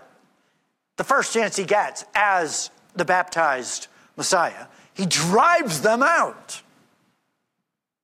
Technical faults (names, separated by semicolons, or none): none